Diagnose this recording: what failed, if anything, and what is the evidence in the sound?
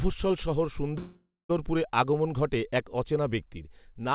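A call audio freeze runs from 0.98 to 1.51 s, just before "আগমণ ঘটে এক অচেনা". The speech stalls, and its last fragment is drawn out as a fading buzz or hiss that ends in about 0.2 s of silence. The speech then picks up exactly where it broke off, so a 0.51 s gap has been inserted and nothing is lost. The likely cause is packets held up on the network, leaving the jitter buffer empty. The narrow band, with nothing above 4 kHz, fits the G.711 A-law call path.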